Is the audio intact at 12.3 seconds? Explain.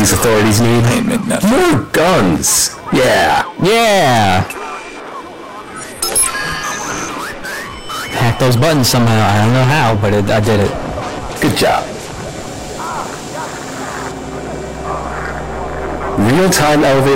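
No. Hard clipping runs through the whole clip, including 12.3 s: about 20 dB of overdrive flattens roughly a fifth of the waveform, producing harsh fuzz on loud passages.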